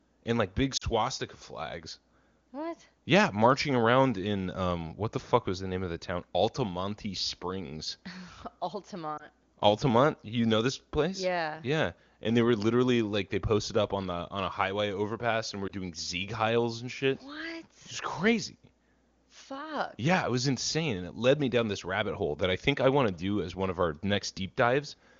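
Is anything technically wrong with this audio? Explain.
Yes. The speech briefly dips and warbles at 0.77 to 0.84 s, 9.17 to 9.27 s and 15.67 to 15.71 s. These are lost AMR speech frames. The AMR-WB decoder is patching over missing data by repeating the last pitch and vocal-tract settings at reduced gain. The first gap, about 40 ms long, fits two lost frames.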